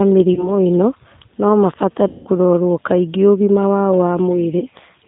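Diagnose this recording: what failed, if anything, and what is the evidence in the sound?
The codec stage failed. The speech carries G.729 codec damage throughout, plainly audible as a rough, slightly synthetic texture with nothing above 4 kHz. The decoder rebuilds each 10 ms frame from a vocal-tract filter, pitch predictor and a few pulses, which fits an 8 kbit/s link.

The network stage also failed, with VoIP packet loss concealed by the speech codec. At 0.34 s, 2.08 s and 4.59 s the sound smears into a fading buzzy tone or coloured noise. The decoder extrapolates from the last good frame. The 180 ms gap at 2.08 s points to several lost packets, and the recovery stays weak until 2.29 s.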